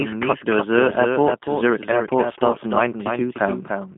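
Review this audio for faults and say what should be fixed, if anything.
Doubled audio track, throughout: a second full-band copy of the speech trails the original by about 300 ms at roughly 5 dB lower, with no decay or room colour. This likely comes from a slower parallel capture path or an edit holding two misaligned copies.

G.729 codec, throughout: nothing passes above 3.6 kHz and the low end thins below 150 Hz. The speech sounds rough and synthetic because it is rebuilt from a vocal tract filter, pitch predictor and sparse pulses, which fits an 8 kbit/s G.729A stream.

To prevent both, record from a single capture path and check edits for duplicated layers, and use a wideband codec at a higher bitrate wherever the link allows.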